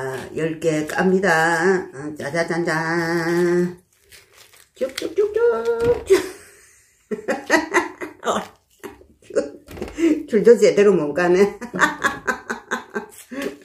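No technical faults are audible anywhere in the audio.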